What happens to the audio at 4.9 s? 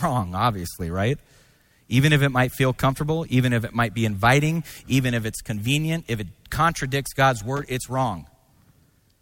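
Nothing goes wrong at 4.9 s; the audio runs through that moment intact, with no dropout, click, distortion or other technical fault.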